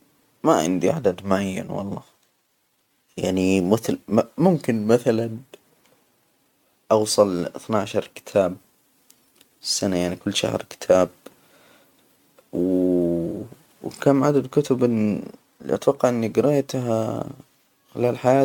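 Throughout, the speech carries generation loss, likely from repeated MP3 re-encoding, perhaps seven passes: swirly, hollow, smeared attacks, with speckled spectral holes on a spectrogram and content up to 20 kHz.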